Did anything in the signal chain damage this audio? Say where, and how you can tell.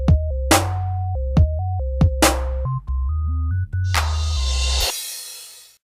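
No, nothing along the signal chain has left an audible mark on this audio. No stage, from capture through to playback, shows evidence of damage.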